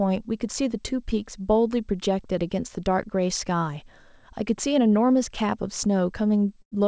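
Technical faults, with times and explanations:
6.62 to 6.73 s: burst of packet loss. Near the end of the speech, about 100 ms of audio never arrived in time to be played. The receiver covered roughly 96 ms of the gap by extending the last received sound and lowering its level as the gap went on, so it is heard as a short held buzz or fading hiss. The speech then resumes further along, with the lost portion simply absent.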